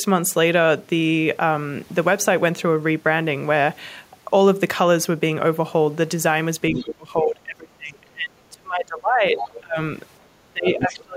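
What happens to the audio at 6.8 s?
From 6.72 to 9.39 s the speech dips by around 25 dB in uneven bursts, which is speech suppressed in double talk, likely from an echo canceller muting both sides at once rather than a plain dropout. Inside that, from 6.75 to 6.82 s, a brief scrap of the other side's voice leaking through sits well below the speech. It is likely residual loudspeaker echo, a second voice rather than a repeat of the talker.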